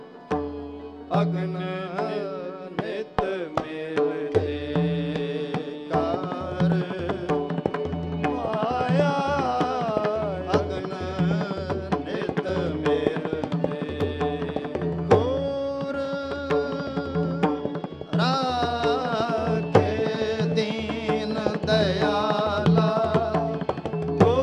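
No technical faults are audible.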